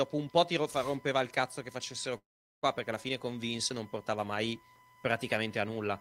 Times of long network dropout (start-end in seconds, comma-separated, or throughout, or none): 2.17-2.64